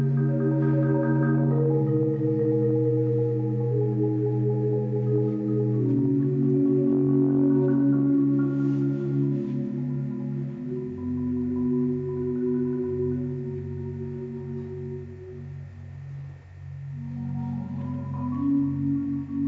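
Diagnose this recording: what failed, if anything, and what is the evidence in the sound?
Nothing in the signal chain has failed: the audio holds steady at every stage, from capture through playback, with no break, dropout, distortion or level disturbance to point to.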